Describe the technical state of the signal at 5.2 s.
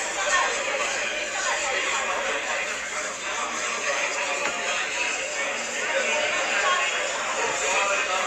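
At 5.2 s the signal is intact, with no audible fault.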